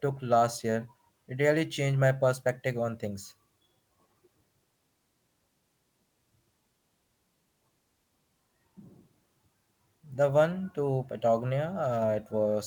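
No technical faults can be heard anywhere in this speech clip. The Opus voice compression is working as intended: the band reaches full width with only light coding traces, which fits hybrid mode at around 24 kbps, where the linear-prediction layer handles the lower range and a transform layer covers everything above 8 kHz.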